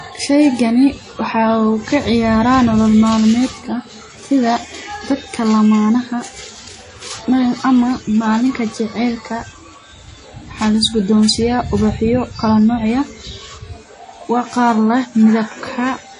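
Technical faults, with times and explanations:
Throughout, WMA compression. The speech sounds ringing and washy, with a hiss that swells and fades with the signal. Nothing is heard above 10.1 kHz. The likely cause is a low-bitrate transform codec, fitting WMA near 32 kbps, whose long blocks smear quantisation noise in time.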